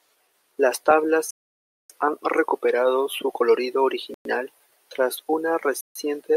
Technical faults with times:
1.31-1.90 Bluetooth stall
4.14-4.25 Bluetooth stall
5.81-5.95 Bluetooth stall

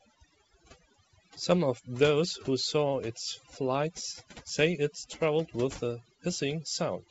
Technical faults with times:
0.00-7.11 overdone noise removal

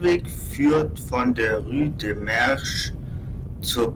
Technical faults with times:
none

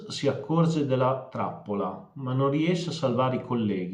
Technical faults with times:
none

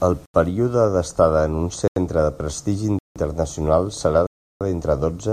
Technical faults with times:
0.26-0.34 block of digital silence
1.88-1.96 block of digital silence
2.99-3.16 block of digital silence
4.27-4.61 block of digital silence

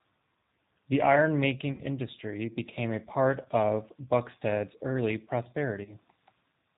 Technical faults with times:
0.00-6.78 G.729 codec
1.72-1.82 VoIP packet loss concealed by the speech codec
3.42-3.48 VoIP packet loss concealed by the speech codec
5.84-5.95 VoIP packet loss concealed by the speech codec

